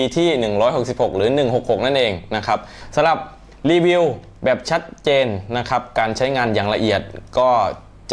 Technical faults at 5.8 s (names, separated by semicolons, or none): none